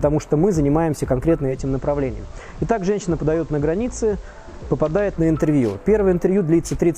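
At 1.44 s the receiver loses its digital stream and falls back to the FM broadcast of the same station, cross-fading over about 170 ms and returning to digital at 5.29 s. This is digital radio blending to analogue. Across that stretch the level drops by about 3 dB, and a faint hiss rises, sitting roughly 35 dB below the signal.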